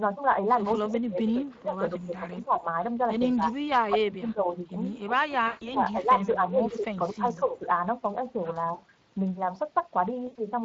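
Throughout, Speex codec damage is plainly audible. Speech sounds hoarse and noisy, consistent with a middle setting around 20 kbps. On a spectrogram, harmonics look smeared and the upper band is a diffuse, noise-like fill.

From 0.73 to 1.53 s, a faint delayed copy of the speech trails the original by 237 ms at about 30 dB down. This echo leak, likely from an incomplete echo canceller on a loudspeaker side, recurs at 3.36–3.64, 5.9–6.34 and 7.25–7.44 s and shows as weak, offset duplicate harmonics.

Speech suppressed in double talk appears at 0.82–2.68, 3.36–4.55 and 5.12–7.64 s. The talker dips by up to about 20 dB or cuts out in pieces, most likely because the canceller confused near speech with echo. On the waveform this looks like notched, chopped envelopes.

VoIP packet loss concealed by the speech codec hits at 5.47–5.78 s, replacing 140 ms, and again at 10.27–10.36 s, replacing 80 ms. 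The sound stretches into a buzzy tone or coloured noise that fades, visible as a stretched pattern that decays in level.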